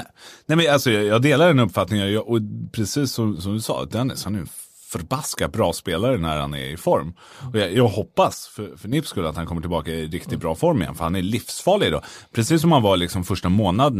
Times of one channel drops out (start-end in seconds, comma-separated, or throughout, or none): 8.34-8.93